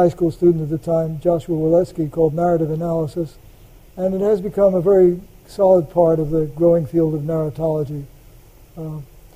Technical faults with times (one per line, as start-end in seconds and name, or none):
none